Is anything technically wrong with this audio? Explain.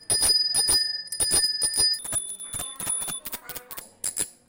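Yes. From 1.99 to 3.81 s, the audio is read two samples at a time: the reader treats sample pairs as single frames, so the sound plays at double speed, an octave higher.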